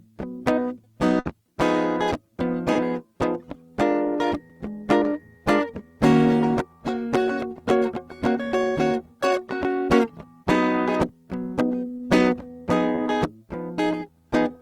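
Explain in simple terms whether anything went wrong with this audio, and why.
Several bits of the music went missing on the way. At 1.19 to 1.27 s there is a burst of packet loss. The receiver stretched the last sound for about 60 ms and let it fade. Then the music jumps ahead, with that piece gone.

Three shorter drops happen at 2.73 s, 11.97 s and 12.95 s. Each is a short concealed packet loss of about 20 ms. The receiver patched each gap by continuing the sound just before it. That leaves a brief smear or wobble in the music.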